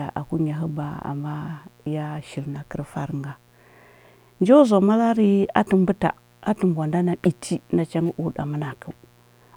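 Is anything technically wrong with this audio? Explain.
Yes. Mains buzz runs through the whole speech clip, roughly 35 dB below the voice. Sharp switching spikes, twice per 60 Hz cycle, are getting into the signal path, spreading harmonics up into the kilohertz range and producing a steady, raspy buzz under everything.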